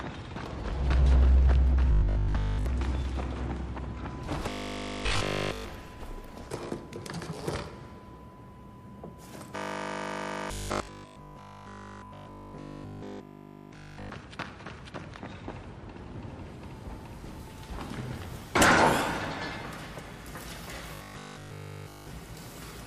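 Four stretches turn robotic, at 1.92 to 2.66 s, 4.49 to 5.69 s, 9.56 to 14.10 s and 20.95 to 22.11 s, and the cause is likely repeated short buffers. The sound collapses into a rigid metallic buzz fixed at 50 Hz, which fits a roughly 20 ms chunk being looped while fresh audio is skipped. The first stretch is mostly affected, while the later three are buzz throughout, the 9.56 s one running longest.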